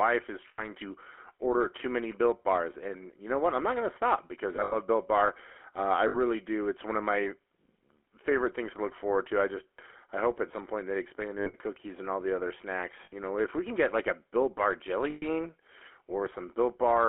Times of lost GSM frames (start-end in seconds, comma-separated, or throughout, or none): 0.48-0.67, 4.56-4.76, 6.08-6.17, 11.38-11.55, 13.04-13.13, 15.10-15.25